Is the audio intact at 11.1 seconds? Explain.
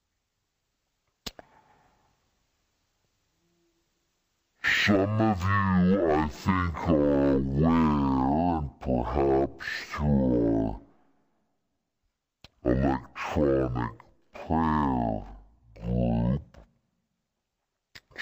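No. At 11.1 s, as across the whole clip, everything plays at half speed and a full octave low, with a faint mirrored image in the upper spectrum. This is stereo read as mono: interleaved left and right samples are played back as one channel, doubling the length.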